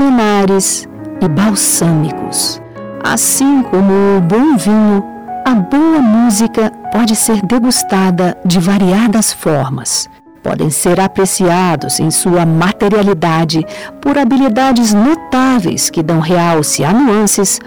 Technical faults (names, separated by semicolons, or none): hard clipping